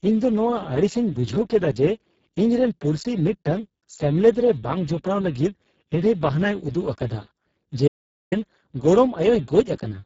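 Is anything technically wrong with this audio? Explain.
Yes, there are two faults.

Throughout, the speech is squeezed through the Speex codec at a heavy setting, consistent with a bitrate near 6 kbps. This CELP coder has too few bits to describe the excitation signal, so it substitutes a rough approximation that sounds noisy, hoarse and edging toward robotic. Nothing exists above 7.6 kHz, and the band from 4 kHz up to that limit is a shaped noise fill, not real detail.

From 7.88 to 8.32 s there is an audio dropout to silence. The input was likely lost, perhaps through a disconnected device, a failed link or an accidental mute, while recording continued and wrote silence. The speech cuts off abruptly and resumes mid-flow. The gap is about 0.44 s of silence with no room tone, and whatever was spoken during it is lost.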